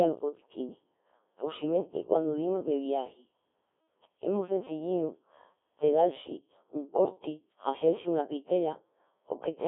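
Codec 2 vocoder throughout: the speech is resynthesised from sine waves carrying only pitch, voicing and envelope, so it sounds robotic and buzzy, with nothing above 3.7 kHz.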